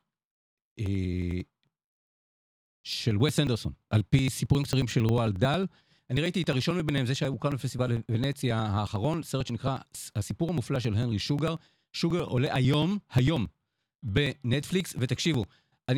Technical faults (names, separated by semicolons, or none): periodic USB or driver dropouts